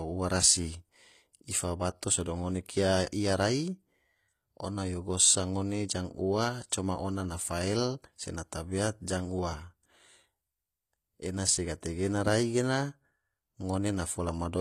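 Throughout the speech, s sounds are gritty, lispy and metallic, and nothing reaches above 14.9 kHz. This is likely HE-AAC compression at around 24 kbps. Unlike a plain low-pass dulling, the treble stays bright because it is rebuilt from copied lower bands, with mismatched harmonics.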